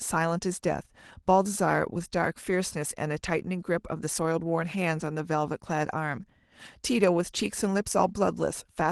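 Speech, with no technical faults to report.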